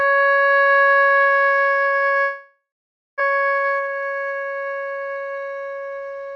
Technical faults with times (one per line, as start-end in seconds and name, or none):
2.21-3.22 long network dropout
3.29-5.23 jitter buffer speed-up